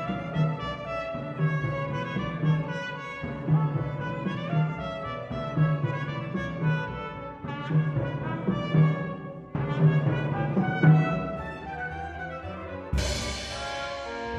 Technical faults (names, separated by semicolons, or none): none